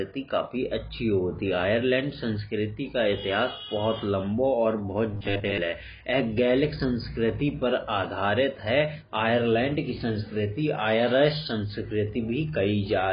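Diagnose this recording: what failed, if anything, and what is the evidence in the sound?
AAC compression runs through the whole recording, and the sound points to the codec stage. Nothing survives above 5.1 kHz, so the speech is dull, and the remaining band is smeared with the heavy, warbling damage of an encoder starved of bits. The likely cause is AAC-LC at a low rate, which fits about 16 kbps: each frame's frequency lines are quantised so coarsely that the encoder drops the top of the spectrum and leaves gaps or substitute noise below it.

Robotic sound from repeated short buffers appears from 5.12 to 5.58 s, a fault at the driver or buffer stage. Through that half-second the speech becomes a rigid, metallic buzz at 100 Hz that only loosely tracks the speech. The likely cause is fresh audio arriving too slowly, so the playback side keeps looping its last short chunk while most of the real signal in that span is skipped. 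A 100 Hz buzz fits a repeated chunk of about 10 ms.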